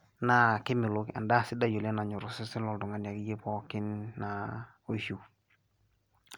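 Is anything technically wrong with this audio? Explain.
No, nothing technically wrong can be heard in this speech recording. Listening through, no fault stands out at any point.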